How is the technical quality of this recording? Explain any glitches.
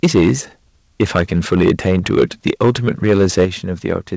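The recording has repeated distortion on its loudest moments and two sudden drops in level, all heard through a call path whose G.722 coding leaves nothing above 8 kHz.

Microphone overload appears from 0.03 to 0.31 s, again from 1.01 to 3.45 s, and briefly from 3.9 to 3.96 s. The peaks take on a harsh, crackly edge, strongest in the first two stretches, where levels sit about 9 and 11 dB past the ceiling. The likely cause is input gain set too high, so the converter flattens the tops of the waveform. In the first stretch roughly a tenth of samples are clipped, in the long middle stretch a few percent, and at the end only a trace.

Microphone volume stepped down twice. At 0.05 s the level dips by about 2 dB, and at 3.45 s by about 6 dB, both as abrupt steps in voice and background together. Each comes right as, or just after, the distorted passage begins or ends, which likely points to the call software detecting clipping and cutting the device's input gain in one move rather than fading it.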